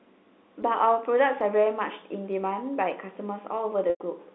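At 3.9 s, lasting to 4.0 s, a packet loss with pitch repetition leaves a 100 ms gap, which fits five lost 20 ms packets. The receiver loops the last pitch period and fades it over about 50 ms, so the sound holds briefly with a buzzy tone, drops to silence, then cross-fades back. On a waveform, identical repeating cycles shrink in amplitude into a flat stretch. On a spectrogram, frozen horizontal harmonics fade into a blank column, all inside the G.711 telephone band of 250 Hz to 3.7 kHz.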